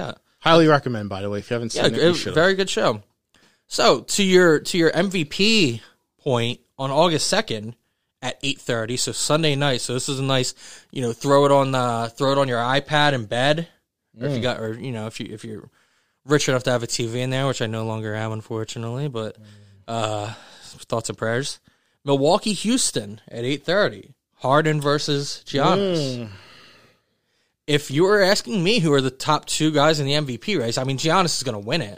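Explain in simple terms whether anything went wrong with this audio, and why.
Nothing went wrong with this audio, because no fault can be heard anywhere in the recording.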